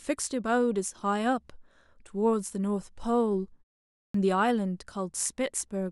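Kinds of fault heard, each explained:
Clipped start after a pause: after about 0.54 s of silence, the output path is slow to wake, so roughly 54 ms of speech at 4.09–4.14 s is swallowed. The waveform jumps abruptly from flat into speech, and the spectrogram shows the onset energy missing.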